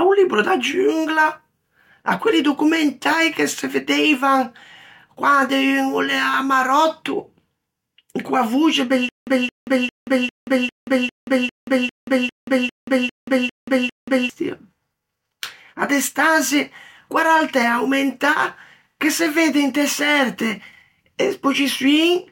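From 9.09 s to 14.3 s you get a stutter with silent gaps: a roughly 220 ms scrap of speech plays, then about 181 ms of dead digital silence, and the same scrap comes back every 400 ms, thirteen times. The speech that should have filled those five seconds never arrives. The likely cause is a playback stall, with each retry replaying the last buffered fragment before running dry again.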